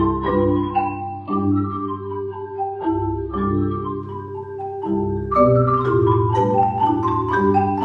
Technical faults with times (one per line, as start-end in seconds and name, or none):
0.00-4.00 adaptive stream starting at a low bitrate